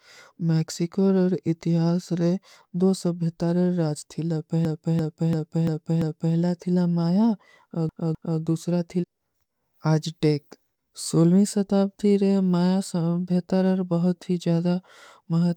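Speech stutters twice, as if the playback skips back and replays the same short piece. From 4.65 to 6.36 s, a 0.34 s slice plays five extra times just before "ଥିଲା ମାଯା", adding about 1.7 s. From 7.89 to 8.40 s, a 0.26 s slice repeats twice more, adding 0.51 s. This is repeated frames: a run of compressed frames was written or sent more than once, and the decoder faithfully played each copy. The block lengths fit runs of four and three frames.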